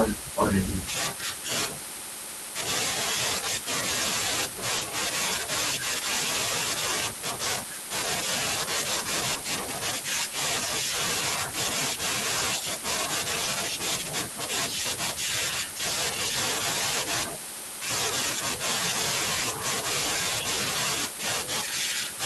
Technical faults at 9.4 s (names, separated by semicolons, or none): short concealed packet loss